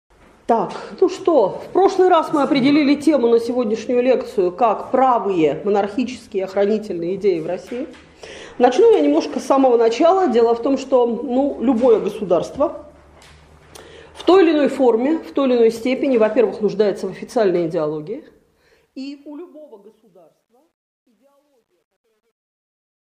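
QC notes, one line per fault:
17.61–23.01 s, truncation distortion on the fade: as the fade-out starts around 17.6 s, the tail turns gritty, growing worst from 19.68 s on. The quiet end steps coarsely, which fits a stage keeping about 11 bits with no dither.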